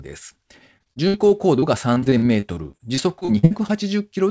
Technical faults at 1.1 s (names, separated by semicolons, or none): repeated packet loss (robotic sound)